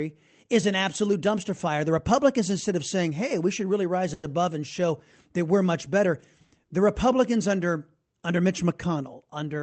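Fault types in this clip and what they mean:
Call audio freeze: Between 4.13 and 4.29 s, just after "we should really rise" and before "and show that we're", the sound stalls and the last moment is stretched out as a buzz or hiss that fades. After about 100 ms of this filler the speech resumes exactly where it stopped, so nothing is lost but a pause has been inserted. The likely cause is delayed packets draining the jitter buffer, with the receiver extending the last audio until they arrived.
Jitter buffer speed-up: From 8.95 to 9.44 s the speech runs at about 109% speed, hurried but at unchanged pitch. Here the jitter buffer held more audio than its target, as happens when late packets arrive in a bunch. To bring the delay back down, the receiver repeatedly cut out short segments one or a few pitch periods long, removing about 50 ms in total across that stretch.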